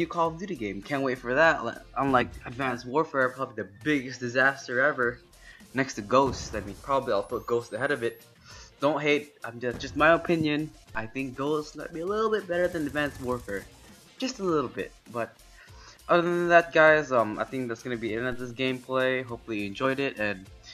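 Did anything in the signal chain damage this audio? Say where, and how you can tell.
Yes. At 2.21 to 2.23, 6.71 to 6.73, 9.82 and 19.83 s the audio jumps forward with a short smeared blip rather than a click. These are compressed frames skipped at the codec or storage stage: roughly one 23.2 ms frame dropped each time, about five at 6.71 s, losing around 100 ms.

At 10.95 s and 18.32 s a low thump is heard while the sound carries on unaltered. This is a DC step at the converter: the waveform's zero line jumps suddenly, then the offset drains away through a 2 Hz high-pass.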